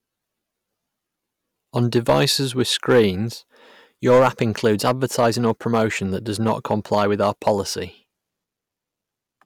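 Hard clipping hits the speech from 1.77 to 3.06 s, 4.07 to 5.81 s and 6.47 to 7.52 s. Peaks overdriven by about 7, 7 and 5 dB are cut flat, adding harsh high harmonics.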